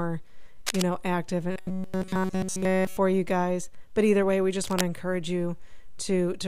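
A speech clip with two kinds of fault. Cable scratch noise appears from 0.66 to 0.85 s and again from 4.64 to 4.82 s. Dense, uneven bursts of scratching sit only a little below the speech. The likely cause is a worn cable or connector being moved. From 1.52 to 2.97 s comes a robotic sound from repeated short buffers. The speech becomes a rigid, metallic buzz at 188 Hz. This is likely a stalled feed, with a slice of about 5.3 ms looped throughout that stretch.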